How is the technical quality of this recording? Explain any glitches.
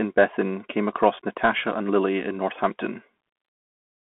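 The recording has been squeezed through a Bluetooth CVSD headset codec for its whole length. CVSD codes the signal one bit at a time at about 64 kbps, adapting its step size. Here the line passes only about 200 Hz to 3.4 kHz, so the speech sounds thin and muffled, with scratchy s sounds, distorted loud high sounds, and a plainly audible granular hiss underneath.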